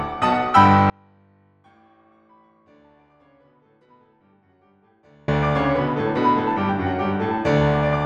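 At 0.9 s the music drops out abruptly to a faint residue, likely a broken signal feed, leaving only a leak roughly 35 dB down until it returns at 5.28 s.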